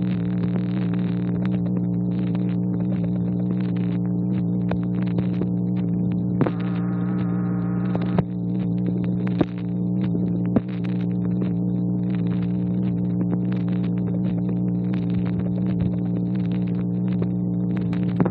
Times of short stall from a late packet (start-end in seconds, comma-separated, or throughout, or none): none